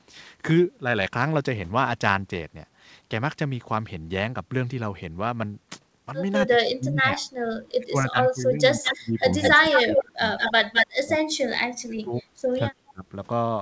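From 6.45 to 7.21 s the speech drops sharply, by roughly 30 dB. This is speech suppressed in double talk. Both ends were likely talking at once, and the echo canceller turned this talker down along with the echo. It happens again from 7.62 to 9.16 s, with about a second of lost speech.

From 8.84 to 10.0 s a second copy of the speech arrives 210 ms late. This is an echo leak. The far end was likely on a loudspeaker, and its canceller passed some of that sound back. The copy is about as loud as the speech itself, so the voice is heard doubled.

Suppression returns from 9.54 to 10.24 s. The echo comes back from 10.38 to 10.87 s, again 210 ms behind. From 11.03 to 12.23 s the drops are deepest, around 35 dB, and about 0.7 s of speech goes missing. A last brief dip of about 20 dB comes from 12.92 to 13.04 s.

Throughout, nothing is heard above 8 kHz, as expected from a G.722 call path.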